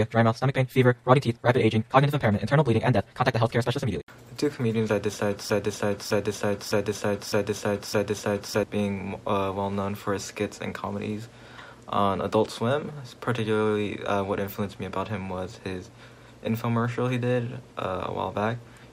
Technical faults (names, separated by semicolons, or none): broken-record loop